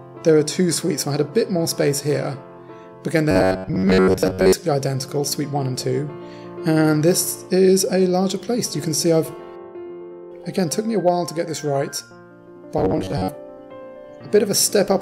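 From 3.31 to 4.53 s and again from 12.78 to 13.38 s, the sound turns into a rigid, metallic buzz at about 93.8 Hz. This is robotic sound from repeated short buffers. The likely cause is audio arriving too seldom, so a slice of roughly 10.7 ms is replayed to fill the gaps. Most of the first stretch is repeats, about half of the second.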